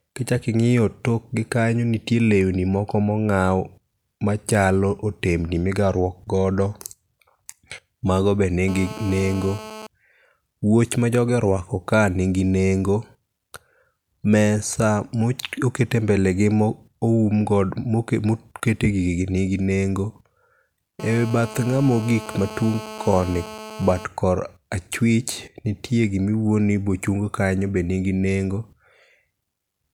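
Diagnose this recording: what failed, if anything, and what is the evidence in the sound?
Analogue wiring rectified a nearby phone's transmit bursts: GSM phone buzz, a steady raspy 217 Hz tone, 8.68–9.87 s after "mago be" and 21.00–24.05 s.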